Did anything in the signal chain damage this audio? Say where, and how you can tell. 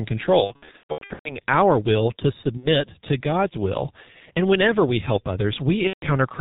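Yes. Throughout, the speech is muffled and hoarse, with nothing above 4 kHz and smeared consonants. This is heavy G.723.1 codec damage at the codec stage. The coarse, slowly updated voice model and 30 ms frames fit a bitrate of around 6 kbit/s.

From 0.44 to 1.39 s, just before "our will to", there are stretched, fading sounds, and again at 2.57 to 2.69 s right after "our will to", and at 5.87 to 6.07 s. This is VoIP packet loss concealed by the speech codec. After network gaps, the decoder extrapolated its last pitch and filter with falling gain. The first burst lost about 570 ms, spread over 810 ms, with gaps of up to 120 ms.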